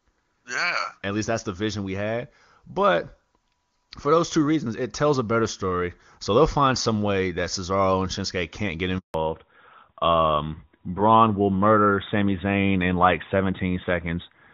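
A speech call carries a handover gap from 8.98 to 9.14 s, right after "can't get": the sound dies within a few tens of milliseconds and stays silent for 160 ms while the call switches networks and no frames arrive. The waveform drops to a flat line, and the spectrogram shows a clean vertical blank. From 9.14 s to the end, fallback to narrowband follows, as the clear HD Voice sound gives way to an older narrowband codec. Everything above 4 kHz is gone, leaving a flat-topped spectrogram band and a duller, rougher timbre.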